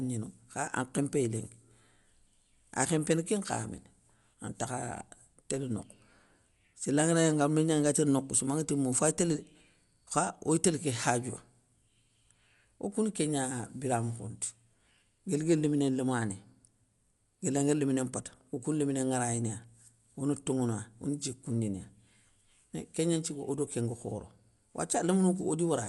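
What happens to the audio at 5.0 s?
At 5.0 s the speech has the same dull, band-limited quality it has for the whole clip. Nothing comes through above about 11.4 kHz, and there's a rough, fluttery noise hanging around the tonal parts. That's plainly audible codec damage, most likely Dolby Digital compression at a low rate, around what you'd expect from 64 kbps. The encoder narrows the band and gives many frequency lines no mantissa bits, and the decoder fills those gaps with dither noise.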